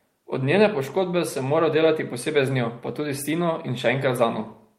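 No faults are audible anywhere in this speech recording.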